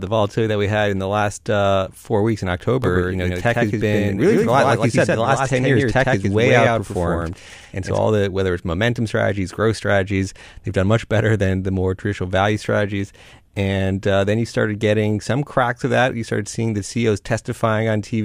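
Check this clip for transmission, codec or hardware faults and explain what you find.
From 2.84 to 7.98 s, a doubled audio track: the speech repeats about 100 ms late, roughly 5 dB quieter, dry and cut in abruptly, likely a second capture path.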